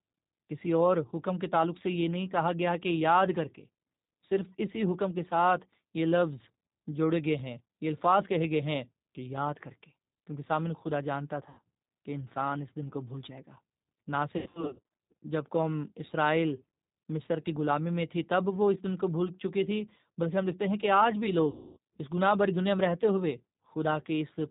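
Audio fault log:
Throughout: G.729 codec. Speech is rebuilt at 8 kbit/s from a filter and sparse pulses. Nothing above 4 kHz remains, and the coarse pulse coding makes it sound rough and synthetic.
11.49 to 11.61 s, 14.37 to 14.82 s, 21.50 to 21.78 s: VoIP packet loss concealed by the speech codec. About 90, 300 and 270 ms are missing. The second gap is scattered over 540 ms. The decoder stretches its last sound into a fading buzz or coloured noise, and the voice stays weak just after each gap.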